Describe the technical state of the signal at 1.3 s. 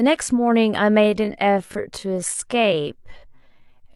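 At 1.3 s you're inside a time-stretched section that starts at 1.0 s and runs to the end of the clip. The speech is slowed to about 0.6 times its normal pace, yet the pitch doesn't drop. That's likely the work of stretching software padding the audio out to a longer length by repeating short slices to preserve pitch. The slowdown hits abruptly, and the speech drags.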